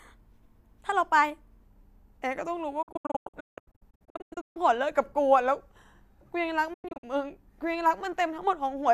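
From 0 to 1.63 s the speech is a section at the wrong speed, running 1.12 times too fast, so pitch rises about two semitones and delivery sounds hurried. The likely cause is playback or editing against a mismatched clock.

A digital broadcast dropout follows from 2.82 to 4.57 s: short muted holes, each fading in about 8 ms, remove about 1.08 s of speech, the longest gap 168 ms. Another dropout at 6.73 to 7.04 s removes 192 ms, the longest hole 96 ms.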